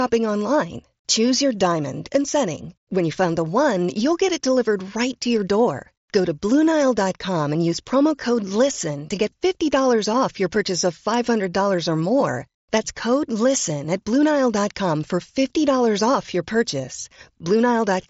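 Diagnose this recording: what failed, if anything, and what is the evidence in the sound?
Nothing stood out on listening: the speech arrives over a Bluetooth mSBC headset link, with content stopping at about 7.7 kHz as that wideband path allows, and with only the light graininess that codec brings.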